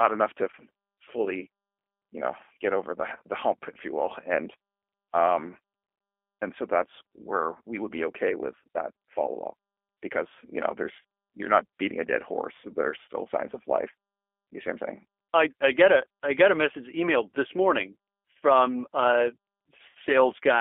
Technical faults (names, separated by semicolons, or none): G.729 codec; VoIP packet loss concealed by the speech codec